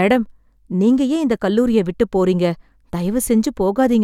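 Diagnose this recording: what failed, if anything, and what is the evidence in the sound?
No stage failed; nothing wrong can be heard.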